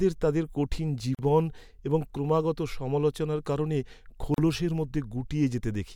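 At 1.15 s, right after "তাদের কঠিন", and again at 4.34 s after "এবং ক্রমাগত সমালোচনার কারণে", the speech drops into a gap at a join of encoded pieces, about 41 ms and 36 ms long. Separately encoded chunks were stuck together with their start delay and end padding left in, so you get a short hole with smeared edges before the speech carries straight on.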